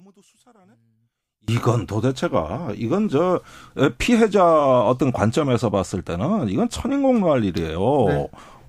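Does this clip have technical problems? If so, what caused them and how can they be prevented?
Yes. From the start to 1.48 s the speech almost disappears when heard in mono, dropping by about 32 dB to a faint trace before returning at full level. This is likely one channel inverted: with one stereo side's polarity reversed, the centred voice, which is nearly identical in both channels, cancels on summing, leaving only the small left-right differences. Checking polarity on every input and monitoring a mono fold-down during recording and editing prevents this.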